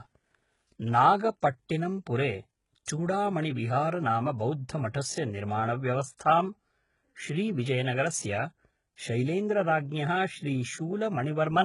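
From start to finish the speech has a harsh, gritty treble: s sounds come out lispy and metallic, and the brightness above the midrange feels synthetic rather than natural, with nothing at all above about 11.1 kHz. This is heavy damage from HE-AAC compression at what sounds like a very low bitrate, likely around 12 kbps. The codec keeps only the lower spectrum and fakes the top by copying bands upward, so the rebuilt harmonics fail to match.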